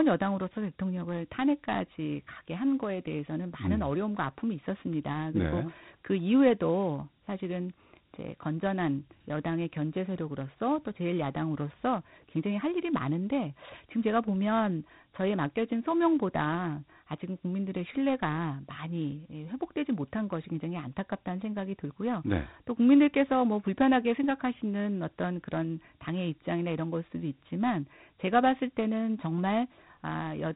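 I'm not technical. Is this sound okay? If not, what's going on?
No. Dialogic VOX ADPCM runs throughout: the speech was squeezed into a phone-system format that removes everything above 3.9 kHz and leaves a plainly audible gritty hiss.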